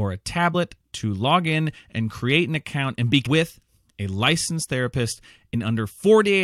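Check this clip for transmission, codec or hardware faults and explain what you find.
Two brief faults appear, both damaged data in a compressed stream: at 0.54 s, just before "to log in and", and at 3.25 s, just after "an account and be". Corrupted bytes make the decoder misread frames and lose sync, each time producing a short glitch before decoding resumes.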